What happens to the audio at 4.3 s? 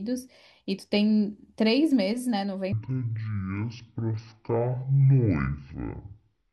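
At 4.3 s the speech sits inside a section at the wrong speed, running from 2.72 s to the end at half speed, likely from playback against the wrong clock. Pitch drops by roughly ten semitones, sounding deep and dragged. A spectrogram shows harmonics squeezed downward and stretched in time, and the waveform shows longer cycles.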